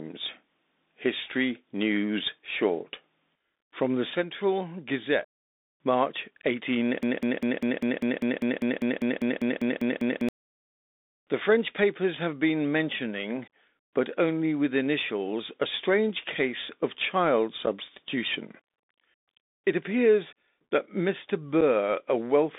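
Throughout, the speech has passed through the Bluetooth CVSD headset codec, a one-bit-per-sample delta scheme running at 64 kbps whose adaptive step trails fast, loud changes. The band is squeezed to roughly 250 Hz to 3.7 kHz, sibilants turn scratchy, and a granular hiss sits plainly under the voice.

From 7.03 to 10.29 s a broken-record loop takes over, likely because the playback or stream stalled and kept resending its last buffered fragment. A 0.2 s slice repeats exactly 16 times back to back, and the speech that belonged there is gone.

At 17.66 s, right after "strange case of child", and again at 21.61 s, unconcealed Bluetooth headset packet loss drops what sounds like a single voice packet each time. Each leaves a 7.5 ms hole with hard edges, and the speech resumes briefly quieter.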